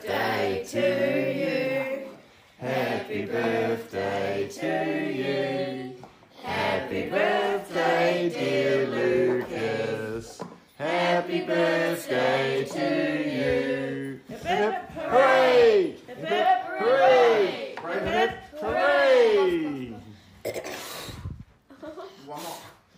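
No technical faults can be heard anywhere in the recording; the signal stays continuous and steady throughout.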